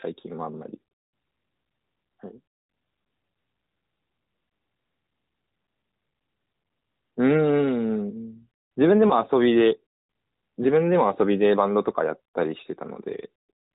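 At around 9.08 to 9.13 s there's a lost AMR speech frame, just a single 20 ms one. A radio error corrupted that frame so it failed its checksum, and the decoder papered over the gap by reusing the previous frame's pitch and vocal tract settings at reduced gain. Because it's only one frame, you hear a brief dip or warble rather than a smeared tail, and the narrowband, 4 kHz-limited voice comes back weak or rough for a moment afterwards.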